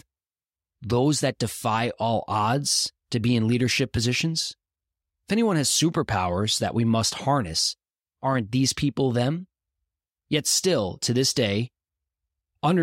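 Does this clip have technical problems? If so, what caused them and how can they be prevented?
Yes, there are clock slip clicks running from about 0.16 s right through to 12.81 s, a faint regular ticking roughly every tenth of a second, well over a hundred in all, each a single sample dropped or doubled. They're most noticeable on the louder stretches of speech and drop out in the pauses. The likely cause is two devices free-running on separate clocks that disagree by a few hundred parts per million. Locking both devices to one shared clock, or using proper asynchronous sample-rate conversion between them, would prevent it.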